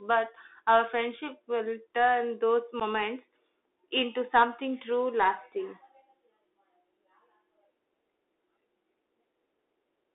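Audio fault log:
Throughout: Bluetooth CVSD headset codec. The link carries audio as one-bit up/down steps, which fits a 64 kbit/s CVSD channel, and the line band sits at 300 Hz to 3.6 kHz. Sharp high sounds outrun the adapting step, so s sounds turn scratchy over a constant granular hiss.
2.80 to 2.82 s: unconcealed Bluetooth headset packet loss. A few short voice packets between headset and phone went missing, about 11 ms in all, and nothing filled the gap. The speech drops into a brief hole with abrupt edges, then returns momentarily quieter as the CVSD step rebuilds.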